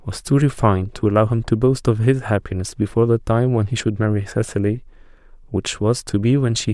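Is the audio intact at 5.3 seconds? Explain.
Yes, the speech at 5.3 s plays through intact, with no dropout, click, glitch or other fault at that moment.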